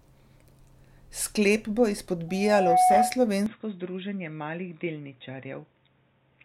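At 2.28 s a loudspeaker feedback squeal starts. The mic is hearing the speaker it's driving, and around 736 Hz the loop gain tips past one, so that frequency feeds on itself. You get a single tone that swells over roughly half a second until it's sitting about 10 dB above the speech, a proper howl. It holds until 3.22 s, when the loop gets broken and it drops out.

Then at 3.46 s the sound changes character and stays that way to the end of the clip. It goes dull and boxy, with nothing left above 3.8 kHz, and the level drops by roughly 5 dB. A faint new noise floor shows up, something like 50 dB under the speech. There's no gap at the change. That's most likely the input switched to a poorer device, such as a headset's call profile or a lesser mic.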